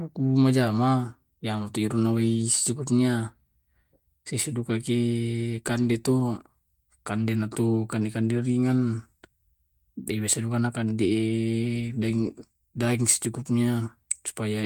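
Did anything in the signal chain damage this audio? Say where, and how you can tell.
No, nothing in the chain audibly damaged this speech recording, and no stage shows any sign of trouble.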